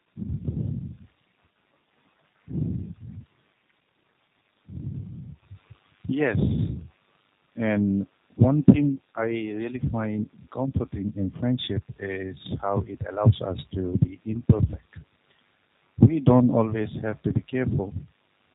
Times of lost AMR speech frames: none

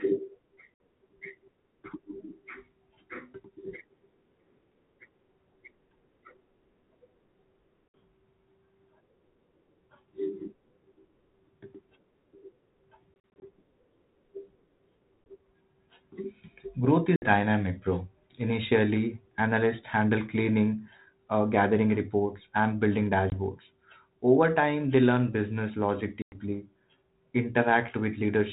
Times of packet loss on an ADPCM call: 0.74-0.78, 7.90-7.94, 13.14-13.46, 15.24, 17.16-17.29, 23.30-23.38, 26.22-26.36

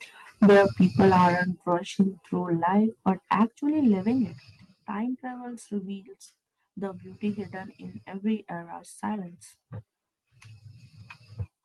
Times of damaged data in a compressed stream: none

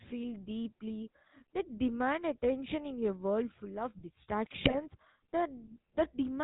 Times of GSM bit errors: 4.64-4.88

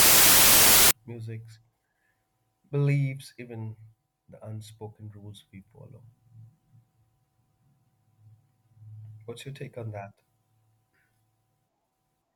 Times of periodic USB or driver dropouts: none

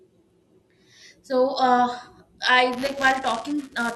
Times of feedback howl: none

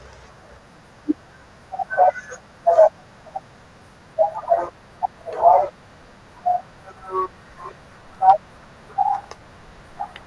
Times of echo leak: none

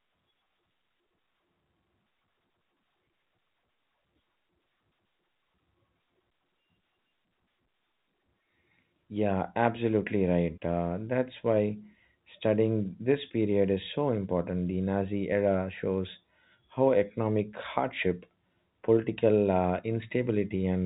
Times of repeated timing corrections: none

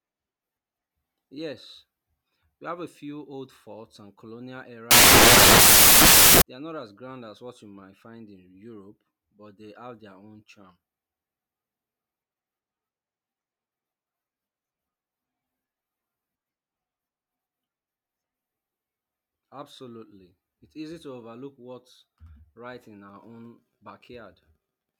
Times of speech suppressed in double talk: none

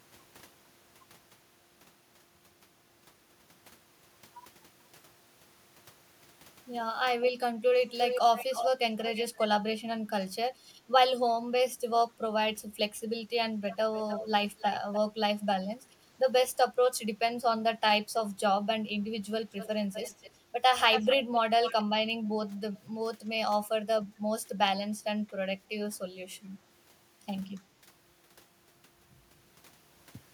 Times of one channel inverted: none

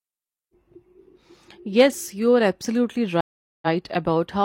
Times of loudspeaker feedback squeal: none

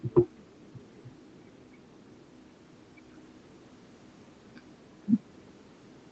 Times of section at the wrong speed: none

